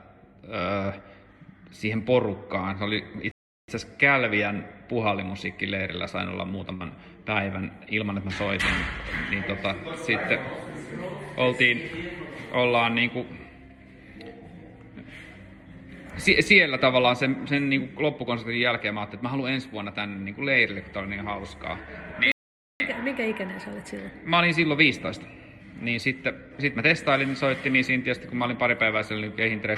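At 3.31 s the sound cuts to silence for about 0.37 s, resuming at 3.68 s; a flat waveform and blank spectrogram column mark a playback stall, likely a starved or blocked player. At 6.74 s a burst of packet loss leaves about 59 ms of concealment, the last sound held and fading, before audio resumes at 6.83 s with about 60 ms missing, seen as a smeared, decaying band. At 22.32 s a second stall silences output for about 0.48 s, until 22.80 s.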